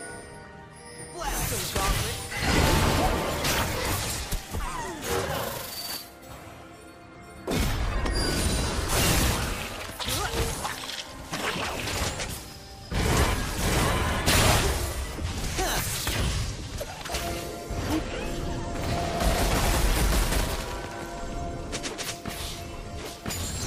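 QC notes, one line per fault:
17.90 s, audio missing between chunks: a tiny skip where roughly 20 ms of sound disappears and the two sides butt straight together, so the audio jumps forward rather than pausing. It likely comes from a recorder working in 6-second chunks and losing a sliver at the handover, which fits its position near the 18-second boundary. Unlike a dropout, there is no gap of silence. The sound simply lurches ahead by a fraction.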